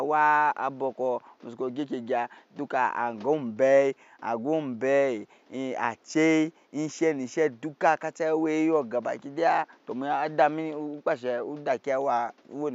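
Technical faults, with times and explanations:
No technical faults are audible.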